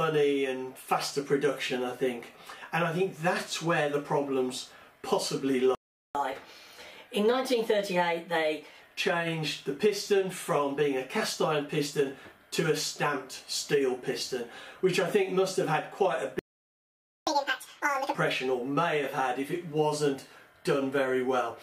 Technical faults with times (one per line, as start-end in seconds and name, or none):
5.75-6.15 playback stall
6.15-8.81 catch-up at higher speed
16.39-17.27 playback stall
17.27-18.15 catch-up at higher speed